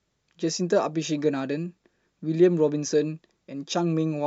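No audible technical faults occur anywhere in this recording.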